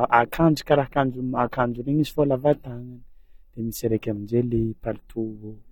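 Throughout, the speech sounds dull and smeared with a fizzy, warbling edge and nothing above 17.3 kHz, likely AAC compression at a low bitrate, around 32 kbps.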